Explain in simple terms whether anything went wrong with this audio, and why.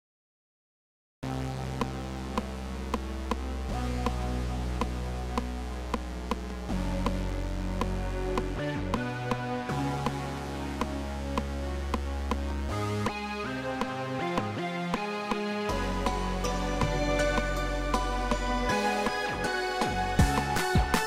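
Yes, something went wrong right at the beginning: it's a cut-off start. For the first 1.23 seconds there's just silence, and then at 1.23 s the sound jumps straight in partway through, with no natural build-up or fade-in. Basically the recording or stream got going a moment too late, so whatever was already happening got chopped, and what you hear picks it up from the middle rather than its real start.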